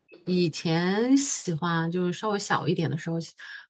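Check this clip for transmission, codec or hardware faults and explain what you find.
One fault is present. From 0.1 to 0.25 s, a faint echo leak returns the speech about 0.41 s late, well below the direct level. The likely cause is a far-end echo canceller missing loudspeaker pickup. Unlike room reverberation, it is a distinct delayed copy, not a smooth decay.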